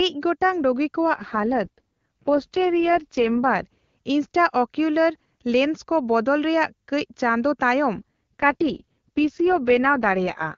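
From 1.14 to 3.66 s, right before "ᱤᱱᱴᱨᱟᱚᱠᱤᱣᱞᱚᱨ ᱞᱮᱸᱱᱥᱠᱚ ᱵᱚᱫᱚᱞ ᱨᱮᱭᱟᱜ", and again from 7.94 s to the end, after "ᱨᱮᱭᱟᱜ ᱠᱟᱹᱪ ᱪᱟᱸᱫᱳ ᱛᱟᱭᱚᱢ", there's an AMR rate drop. The speech turns raspy and synthetic with no gap or bandwidth loss, which fits the codec falling from 23.85 to 6.6 kbit/s.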